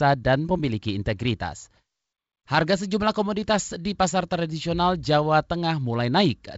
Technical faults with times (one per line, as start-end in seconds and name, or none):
none